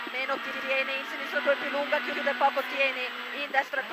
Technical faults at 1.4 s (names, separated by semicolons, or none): none